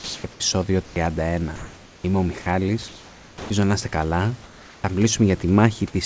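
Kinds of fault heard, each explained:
Comfort noise in place of the background: In the pauses, the real room background, about 20 to 26 dB below the loudest speech, gives way to a steady, featureless hiss. This is likely because the sender stopped transmitting during silence and the receiver synthesised noise instead. It shows at the start, near 0.9 s, before "να είστε καλά" and after it, shifting the level by up to about 11 dB. Unlike a detector dropout, no speech goes missing, only the background's texture.
Sound dropped by the voice detector: At 0.32 to 0.40 s and 2.42 to 2.46 s, stretches of 80 ms and 40 ms are replaced by flat noise, each swallowing about 30 ms of actual sound. The likely cause is the sender's detector taking part of the sound for background and briefly ceasing to send. The sound breaks off, then returns once detection triggers again. What separates this from plain comfort noise is that real speech, not just room sound, is lost.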